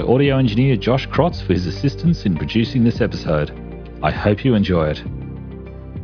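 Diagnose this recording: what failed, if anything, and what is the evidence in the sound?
Nothing failed; no faults heard.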